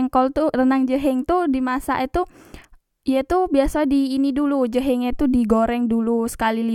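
At 5.13 s a phantom power thump appears, lasting until about 5.40 s: a supply was switched on or off on the live input, and the voltage step passed through the coupling capacitors as a deep low thump peaking near -17 dBFS and decaying within about 61 ms.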